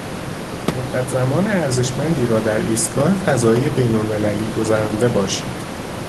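No faults detected: the room noise sits about 9 dB below the speech and is part of the recording, and the Opus call path at 24 kbps limits the top end to about 12 kHz, as expected.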